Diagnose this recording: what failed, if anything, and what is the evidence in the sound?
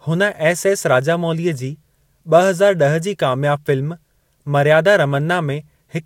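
Nothing stood out on listening to this speech recording that would point to a failure at any stage of the chain.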